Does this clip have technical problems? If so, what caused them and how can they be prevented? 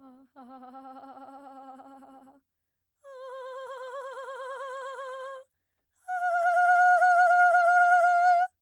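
No, this music clip has no audible technical problems.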